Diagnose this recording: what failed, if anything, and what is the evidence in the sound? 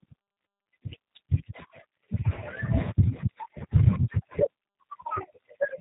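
G.729 codec damage, present from start to finish: the failure sits at the codec stage. Nothing passes above about 3.8 kHz, and the speech has a plainly audible rough, synthetic edge. The encoder discards the waveform and resends only a vocal-tract filter, a pitch predictor and a few pulses in each short frame, so the decoder rebuilds an approximation. The band limit and texture fit an 8 kbit/s G.729A link.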